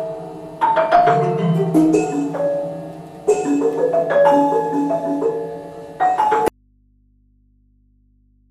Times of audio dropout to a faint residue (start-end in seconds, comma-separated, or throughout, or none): 6.48-8.51